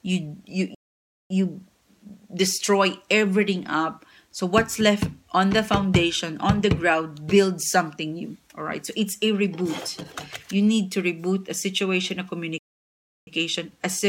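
Playback stalls at 0.75 s and 12.58 s: the audio drops to silence for about 0.55 s and 0.69 s, likely because the player starved of data, then resumes.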